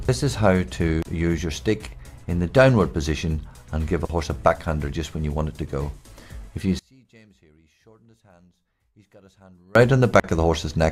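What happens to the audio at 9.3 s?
At 9.3 s the sound has collapsed to a faint residue, down about 32 dB, from 6.79 to 9.75 s. The likely cause is one channel inverted: with one side's polarity reversed, everything common to both channels cancels in the mono sum, leaving only their small differences.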